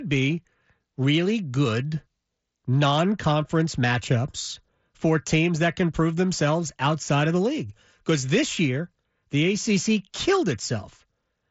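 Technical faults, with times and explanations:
No technical faults found; the speech tops out near 7.7 kHz, as expected of a Bluetooth mSBC headset codec path.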